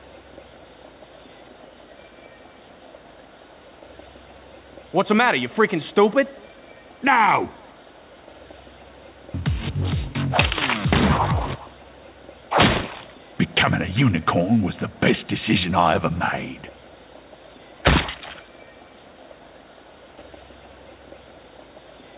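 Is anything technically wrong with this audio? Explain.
No, nothing here is technically wrong.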